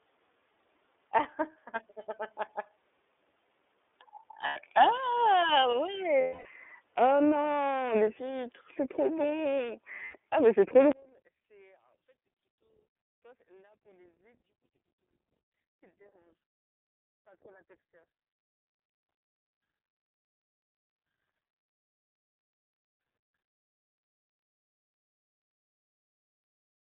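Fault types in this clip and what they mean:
iLBC codec: The whole clip is confined to about 300 Hz to 3.6 kHz, with a rough, synthetic grain from 30 ms frames at 13.33 kbps, not just the dullness of a plain band limit.
Lost iLBC frames: At 4.47 s, 6.21 s and 10.05 s (after "huîtres c'est trop bon") there are gaps of 90 ms, 240 ms and 90 ms. Each becomes a held, buzzy vowel rather than silence, and the audio recovers immediately afterwards.
One channel inverted: From 10.92 s, after "mais c'est trop", the speech drops by about 35 dB to a faint trace for the rest of the clip. The likely cause is one channel with reversed polarity cancelling in a mono sum. It differs from a dropout because some residue remains.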